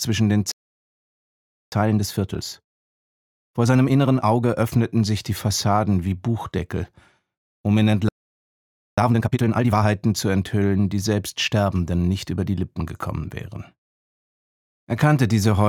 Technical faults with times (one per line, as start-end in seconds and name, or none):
0.51-1.72 playback stall
1.72-4.72 time-compressed catch-up
8.09-8.98 playback stall
8.98-9.86 time-compressed catch-up